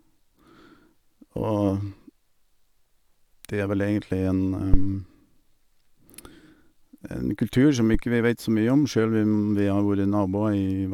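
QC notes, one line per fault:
4.74–4.94 s and 7.94–8.03 s, phantom power thump: two deep, low-frequency thumps as a supply voltage on the live input is switched, sending a sudden DC step through the coupling capacitors. The capacitors pass the step as one large, slow excursion, so it is heard as a dull knock. The first is louder, peaking at about -3 dBFS and decaying over 46 ms. The second peaks at about -12 dBFS and dies away in 20 ms.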